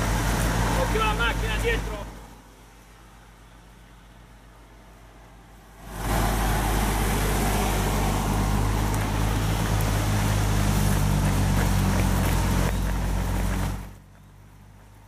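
Mains hum at 50 Hz, roughly as loud as the audio, runs throughout from power-line coupling, drawing a steady horizontal line at 50 Hz across the spectrogram.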